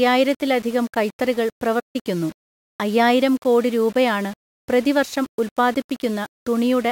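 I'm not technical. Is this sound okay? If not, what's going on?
No. Throughout the speech there is a grainy, gritty roughness that follows the talking, likely low bit depth without dither, which fits audio stored with only about 6 bits. At 1.79 s the sound drops out for about 0.15 s, resuming at 1.96 s. This is a playback stall, likely the player running short of data briefly.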